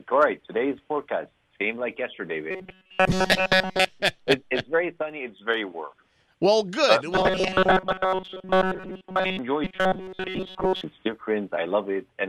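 Robotic sound from repeated short buffers appears from 2.51 to 3.90 s, 7.13 to 9.39 s and 9.64 to 10.84 s, where the audio collapses into a rigid metallic buzz at 188 Hz. This is likely a stream that is starved of new data and loops its last 5.3 ms repeatedly, most of the time. A spectrogram would show flat, evenly spaced harmonic lines at multiples of 188 Hz. The waveform would show identical short cycles stamped out in a row.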